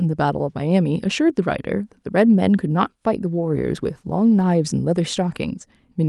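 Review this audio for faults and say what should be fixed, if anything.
From 3.26 s to 4.59 s the speech turns rough and muffled, losing its top end, then clears again. That's a call bitrate drop: the encoder was starved of bits and coded coarsely, consistent with a fall from about 64 kbps to 18 kbps held for about 1.3 s. To prevent it, stabilise the network path or set a higher minimum encoder bitrate.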